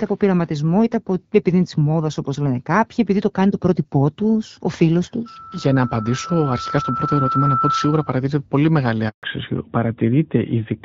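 From 5.25 s to 8.26 s a loudspeaker feedback squeal sets in: a microphone is picking up the speaker it drives, and a 1.3 kHz tone rises over roughly two seconds until it sits at about the level of the speech. On a spectrogram it appears as one bright horizontal line at 1.3 kHz that thickens as it grows.

At 9.09 s a handover gap cuts the speech for 140 ms, until 9.23 s, as the call switches networks and no speech frames arrive. The waveform shows a short fade to a flat silent stretch, and the spectrogram shows a blank vertical band across all frequencies.

From 9.23 s to the end the call falls back to narrowband, which fits a switch from the AMR-WB HD Voice codec at 12.65 kbit/s to AMR-NB at 12.2 kbit/s. Nothing above 4 kHz passes, so the speech loses its airy upper range and sounds duller. On a spectrogram the energy that reached up to about 7 kHz stops at a sharp ceiling at 4 kHz.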